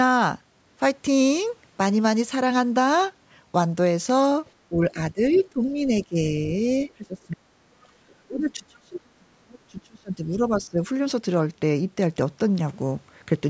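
At 4.45 to 4.51 s a faint second voice slips in, about 35 dB under the speech. This is the other side's voice leaking through, likely loudspeaker echo the canceller failed to remove. It returns at 5.31 to 5.44 s, louder at about 20 dB down, and at 7.32 to 7.36 s at about 30 dB down. Each time it is a separate scrap of another talker layered on top, not a change in the main speech.

The main speech itself is turned down in three spans: 4.69 to 4.97 s and 5.13 to 6.68 s, each dipping by about 15 dB, then 6.96 to 10.84 s, where it drops as far as about 35 dB. This is speech suppressed in double talk. While both sides were speaking, the canceller likely could not separate its own talker from the echo and attenuated both. What marks it out from leakage is that the wanted voice is turned down, rather than an extra voice being added. Throughout, the audio stops at 8 kHz, as expected from call microphone processing.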